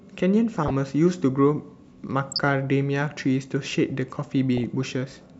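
DAB burbling hits this speech at 0.55–0.70 s, 2.32–2.49 s and 4.57–4.83 s: weak reception lets bit errors slip past error correction into the MP2 data, so corrupted sub-band samples add short blips of noise and corrupted scale factors make sub-bands jump in level for up to a frame.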